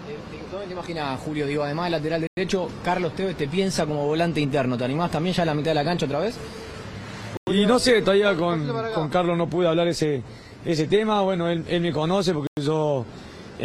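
Gap between chunks at 2.27, 7.37 and 12.47 s: silence is left between each 5-second chunk, leaving a 100 ms hole at every join.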